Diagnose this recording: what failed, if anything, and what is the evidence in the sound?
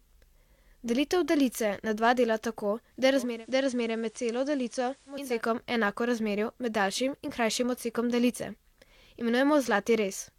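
The failure is at reception: the hybrid tuner lost its digital signal and carried out digital radio blending to analogue, cross-fading over 364 ms to the station's FM broadcast from 3.10 s, just after "dela tako da je", and returning at 5.42 s. Across that stretch the sound drops by about 4 dB and gains hiss sitting roughly 30 dB below the signal. Both are the FM path's level and noise floor replacing the clean digital stream.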